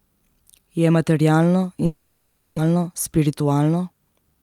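From 1.85 to 2.60 s the speech smears into a fading buzz for about 0.73 s, and about 0.6 s never returns, likely a long network dropout. From 2.68 to 3.77 s the speech runs about 10% faster at unchanged pitch and sounds hurried. This is a jitter buffer speed-up, trimming roughly a tenth of a second of short pitch-period pieces to cut the built-up delay.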